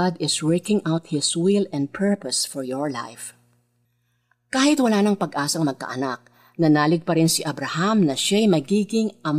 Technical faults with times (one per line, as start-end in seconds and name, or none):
none